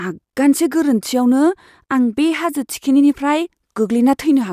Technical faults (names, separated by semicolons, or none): none